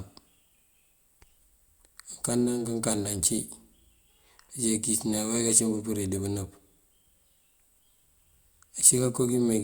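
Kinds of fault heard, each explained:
No technical fault can be heard in the speech recording; the signal holds steady throughout, with no interruptions, distortion or level problems.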